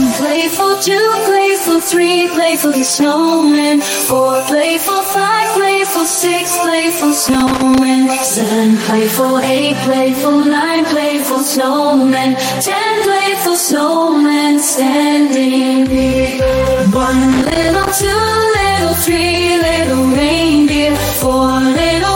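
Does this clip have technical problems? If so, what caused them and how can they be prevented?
Yes: irregular bursts of crackle at 7.27–7.78 s and 17.32–18.04 s are loose connector crackle, a worn contact intermittently breaking the signal. Cleaning or replacing the connector and securing the cable prevents it.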